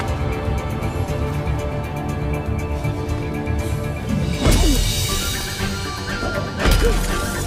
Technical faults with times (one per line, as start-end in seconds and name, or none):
1.09 repeated buffer
4.44 repeated buffer